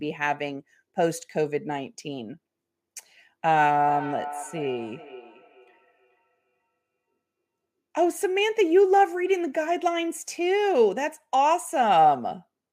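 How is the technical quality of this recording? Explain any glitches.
The recording has one glitch: feedback echo between two devices. It runs from 3.75 s to 6.78 s. The speech comes back at a regular interval of roughly 0.4 s. Each return is thinner and more ringing than the last. The loudest repeat sits about 15 dB below the direct speech. A second device in the same room is likely playing this call aloud. The microphone picks that playback up again. Its echo canceller only knows its own output, so the loop survives.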